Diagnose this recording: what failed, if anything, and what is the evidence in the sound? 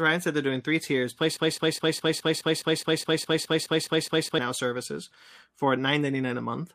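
Right after "they're doing three tiers", at 1.37 s, the speech catches on a fragment of about 0.21 s and repeats it exactly, back to back, 14 times until 4.39 s, when it resumes at "services for". This is a broken-record loop, and the stage is most likely the playback or streaming buffer: it stalled and kept resending the last block it held, so roughly three seconds of the original speech never arrived and is gone.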